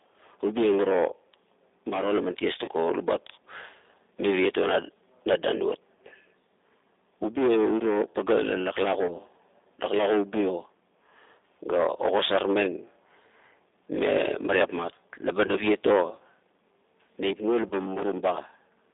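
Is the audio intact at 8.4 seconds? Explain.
No. At 8.4 seconds the speech carries G.729 codec damage, as it does throughout the clip. Each short frame is rebuilt from a vocal tract filter, a pitch predictor and a few pulses, so the sound is plainly rough and synthetic, confined to about 300 Hz to 3.7 kHz, consistent with an 8 kbit/s link.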